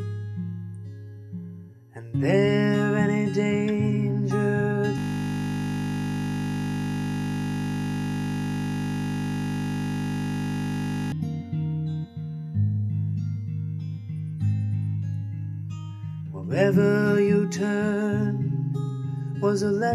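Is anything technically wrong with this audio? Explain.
Yes. From 4.98 to 11.12 s there is a system hang loop. The system froze and one 20 ms buffer repeated about 300 times, giving a steady 50 Hz buzz.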